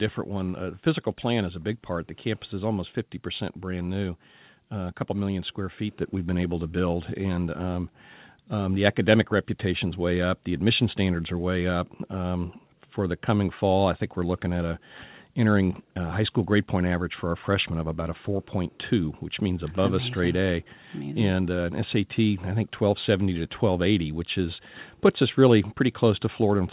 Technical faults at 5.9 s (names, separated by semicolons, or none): microphone volume stepped up